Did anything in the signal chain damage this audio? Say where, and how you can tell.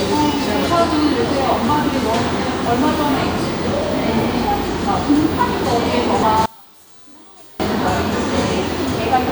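Yes. One channel inverted, from 6.46 to 7.60 s: the sound drops by about 27 dB to a faint copy, then returns. This likely comes from reversed polarity in the wiring or channel routing, so the shared content cancels on mono summing, leaving only inter-channel differences.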